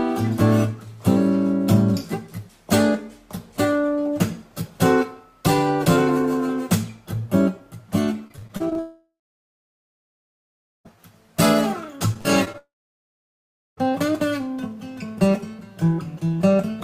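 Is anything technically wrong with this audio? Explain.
Yes. Two kinds of fault, each occurring twice.

Repeated packet loss (robotic sound) runs from 8.27 to 8.77 s (seven gaps, longest 30 ms, about a quarter of the span concealed) and from 12.14 to 12.56 s (four gaps, longest 39 ms). Each gap is patched by extending the preceding sound, giving a choppy texture with pieces missing.

A long network dropout follows each burst. From 8.79 to 10.87 s about 2.1 s of audio is lost. From 12.58 to 13.85 s about 1.2 s is lost. A fading buzz or hiss briefly continues the last sound, then gives way to silence of roughly 1.7 s and 1.1 s respectively, likely from the stream stalling. Audio resumes without the lost portion.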